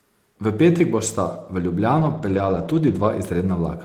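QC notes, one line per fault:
1.97–2.79 s and 2.87–3.05 s, lost packet rebuilt from error correction: no dropout, but both stretches go rough and hissy. Lost packets were filled from the low-bitrate backup copies carried in the following packets, which fits a run of 20 ms packets.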